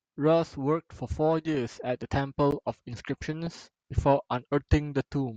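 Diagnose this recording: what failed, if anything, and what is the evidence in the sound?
What failed is the broadcast chain: DAB burbling, from reception errors reaching the MP2 decoder. You hear short noise blips over the speech at 1.46 to 1.55 s, again, and longest, at 3.33 to 3.53 s, and as a tiny blip at 5.00 s. A bit error rate of a fraction of a percent slips past the error correction, corrupting samples and scale factors, so individual sub-bands jump in level for up to a frame at a time.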